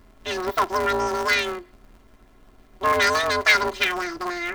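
Planar audio read as interleaved affects this speech clip from start to finish. Each short block holds all of one channel's samples followed by all of the other's, but playback treats them as alternating left-right pairs. Every 5.8 ms block, which fits a 256-sample block, therefore plays twice at double speed, first one channel and then the other. Because the blocks are so short, the result is a robotic buzz at the 172 Hz block rate rather than an audible octave jump.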